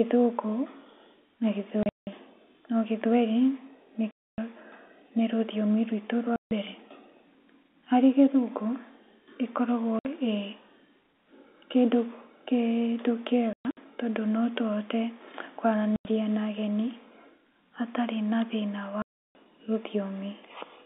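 Packets are being dropped and replaced with silence, seven times, at 1.83–2.07, 4.11–4.38, 6.36–6.51, 9.99–10.05, 13.53–13.77, 15.96–16.05 and 19.02–19.35 s. These holes of 60 to 330 ms, all multiples of about 30 ms (which fits 30 ms packets), chop the band-limited telephone speech with hard edges.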